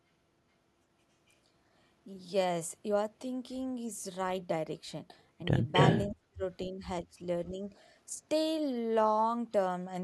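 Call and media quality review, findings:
Echo leak, 5.74–6.08 s. Far-end echo canceller likely failed to remove its loudspeaker pickup from the mic signal, so residual echo was returned. Delayed copy of the sound trails the original by 282 ms, at about 5 dB above the direct speech, heard as a distinct repeat layered over the talker for roughly a third of a second.

Speech suppressed in double talk, 6.07–6.43 s, 6.66–6.85 s, 7.04–7.2 s, 7.51–7.63 s, 8.15 s. Echo canceller likely misread overlapping talk as echo and attenuated the near-end signal too. Deepest dip, around 35 dB, in the first window, nearly muting the talker. Later dips of around 15 dB and 10 dB give audible holes, and the last two are slight level sags.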